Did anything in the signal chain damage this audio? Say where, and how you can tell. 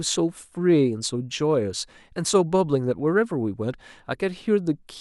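No, nothing along the chain has audibly damaged this speech recording, and the signal stays intact with no breaks, distortion or added disturbance at any point.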